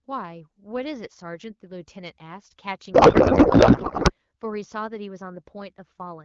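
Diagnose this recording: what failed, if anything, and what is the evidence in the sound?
The failure is at the codec stage: a codec payload misread from about 2.93 to 4.12 s. For that stretch the speech turns into garbled noise and warble that barely tracks the talker, then snaps back clean. That fits octet-aligned AMR frames being unpacked as bandwidth-efficient, so the decoder finds every field at the wrong bit offset. Around it, the AMR-WB audio has the clear, lightly coded sound you'd expect from roughly 12.65 kbit/s HD Voice.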